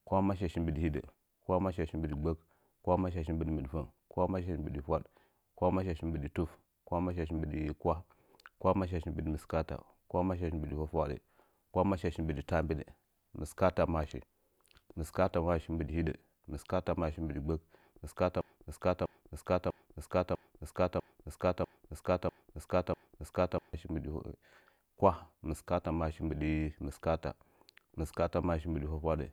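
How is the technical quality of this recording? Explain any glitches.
The recording has one clear glitch, a broken-record loop in the speech from 18.41 s to 23.74 s. A fragment about 0.65 s long plays eight times back to back, each copy identical, and whatever should have followed in those seconds never arrives. The likely cause is a player or stream that stalled and kept re-sending its last buffered piece. Unlike an echo, the repeats don't fade or overlap, and unlike a brief stutter, they carry on for over five seconds.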